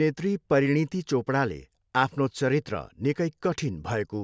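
No technical faults detected.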